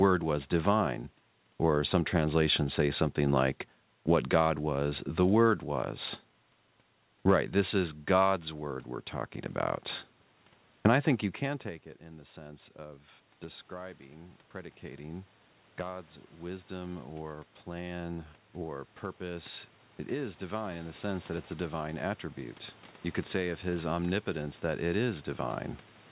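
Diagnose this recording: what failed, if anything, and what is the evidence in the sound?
The failure is in call processing: automatic gain rising, twice. Right after "I think you" the level at the mic drops about 20 dB, as if the talker leaned back, and from 11.42 to 18.05 s the AGC climbs roughly 8 dB to compensate. It does it again from 19.17 to 25.28 s, another 8 dB or so. You can hear the room noise swell right along with the voice over several seconds, which is how you know it's the gain stage ramping.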